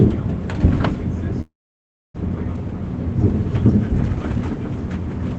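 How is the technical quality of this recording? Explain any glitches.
The recording has one clear glitch, a call audio freeze. The sound also passed through a call codec, which, from its character, fits Opus at a modest bitrate, and it is band-limited with nothing above 8 kHz.

From 1.41 s to 2.16 s the sound stops advancing. The likely cause is delayed packets draining the jitter buffer, so the receiver stretched the last fragment into a brief fading buzz and then left about 0.63 s of near-silence. When packets resumed, the sound continued from where it stopped, with nothing lost, so everything after it runs about 0.73 s late. On a waveform this shows as a short decaying tail, then a flat line. On a spectrogram it appears as smeared horizontal streaks, then an empty band.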